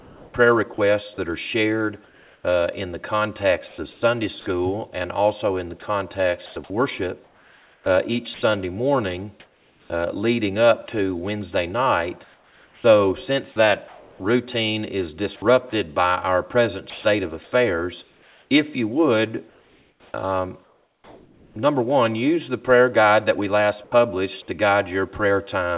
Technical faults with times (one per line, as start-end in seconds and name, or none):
0.00-4.02 sound chopped by the voice detector
5.80-10.88 sound chopped by the voice detector
12.24-21.56 sound chopped by the voice detector
23.84-23.92 sound dropped by the voice detector